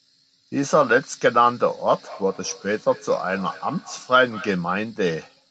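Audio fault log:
1.95–4.72 s, feedback echo between two devices: the speech returns about every fifth of a second, thinner each pass, peaking about 20 dB below, as a second nearby device replays and recaptures it.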